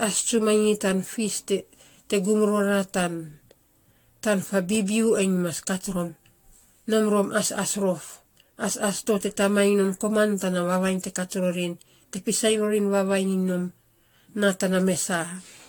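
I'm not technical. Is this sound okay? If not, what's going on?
No. The recording was most likely saved in a compressed format, then opened and saved again several times, around five. Each save throws away a little more detail in slightly different places, and the damage piles up. The result is generation loss: throughout the speech, the sound has a swirly, watery, hollow quality, and the starts of sounds are smeared rather than crisp, as if the voice were heard through a thin layer of water.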